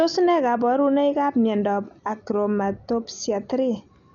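From start to finish the speech sounds dull, with nothing above about 6.9 kHz and a rough, fluttery noise hanging around tonal parts. That's likely Dolby Digital compression starved of bits, which fits something near 48 kbps, with many frequency lines filled with dither noise instead of real detail.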